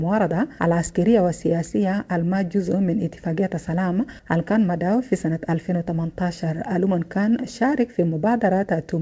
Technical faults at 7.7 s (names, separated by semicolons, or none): none